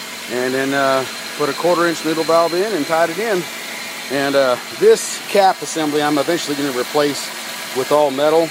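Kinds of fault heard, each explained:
No dropouts, clipping, glitches or other faults can be heard anywhere in the signal.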